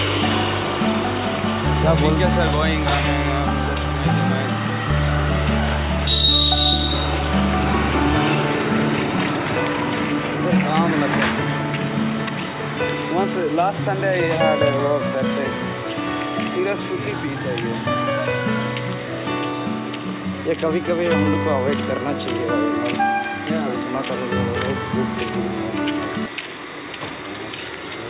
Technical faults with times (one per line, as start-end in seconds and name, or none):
none